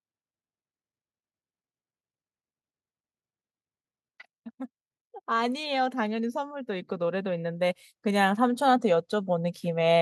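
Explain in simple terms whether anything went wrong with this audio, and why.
The automatic gain control judged the input too quiet and kept turning the volume up from 5.28 s to 9.97 s. This automatic gain rising makes the speech and the background noise swell louder together, gradually, rather than in one sudden jump.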